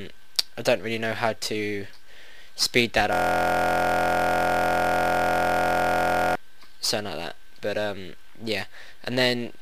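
From 3.13 to 6.35 s a system hang loop takes over: a 23.22 ms slice repeats, giving a steady 43.1 Hz buzz, which fits a 1024-sample buffer.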